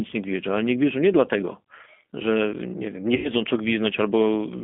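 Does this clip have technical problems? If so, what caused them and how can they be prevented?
Yes. The whole clip carries G.729 codec damage: the speech is confined to a telephone band of roughly 200 Hz to 3.5 kHz, with nothing above it, and has the slightly rough, synthetic texture of a coder that rebuilds each 10 ms frame from a vocal-tract filter, a pitch predictor and a handful of pulses. The degradation is plainly audible and fits an 8 kbit/s G.729A link. Prevention: carry the call over a wideband codec such as G.722 or Opus instead of G.729.

From 3.16 to 3.30 s, just after "że nie wiem nie", there is VoIP packet loss concealed by the speech codec. About 80 ms of audio is missing, which fits four 20 ms packets being dropped. The decoder fills the gap by repeating its last pitch and filter state at falling gain, so the voice smears into a fading buzzy tone or coloured noise. Because each frame depends on the previous one, it stays weak or distorted for tens of milliseconds or more after real packets resume. 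Prevention: reduce loss with QoS marking and a stable network path, and add forward error correction or packet redundancy.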